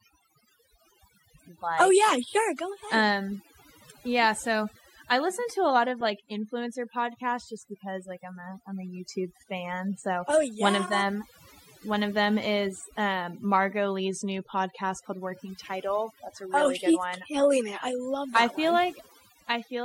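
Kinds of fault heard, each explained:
Overdone noise removal: noise reduction set too aggressively cuts frequency bands near the noise floor throughout, leaving near-silent gaps with twinkling specks and taking quiet parts of the speech with them.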